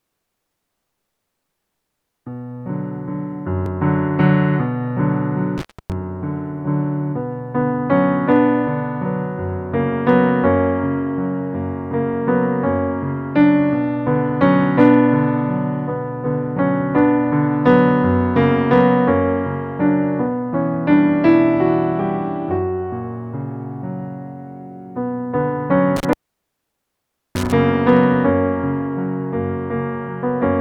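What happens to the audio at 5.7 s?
An intermittent contact cuts the sound from 5.58 to 5.92 s: a loose connection opens for about 0.28 s, with crackle at both edges, unlike a clean digital dropout.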